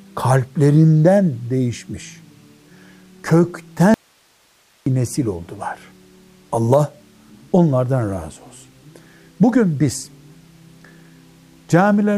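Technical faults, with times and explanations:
3.94–4.86 s, audio dropout to a faint residue: the sound cuts off abruptly and stays out for about 0.92 s, leaving only low hiss roughly 40 dB below the normal level until the signal returns just as suddenly. There is no fade at either edge, so it cannot be mistaken for a pause. The likely cause is a brief loss of the source feeding a path that stayed live, so its own noise floor carried through the gap.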